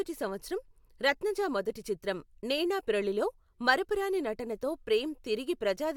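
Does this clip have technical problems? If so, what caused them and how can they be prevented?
No, there are no technical problems to be heard in this speech clip. Since nothing has gone wrong, there is nothing here to prevent.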